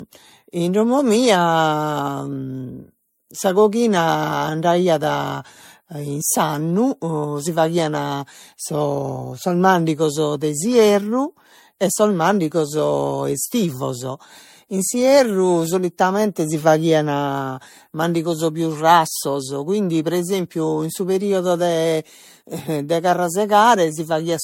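Throughout the speech the sound is swirly, smeared and hollow, consonant attacks blur, and nothing remains above 16.6 kHz. This is likely generation loss: repeated MP3 encoding, around four passes at what sounds like 64 kbit/s, each requantising on a shifted frame grid.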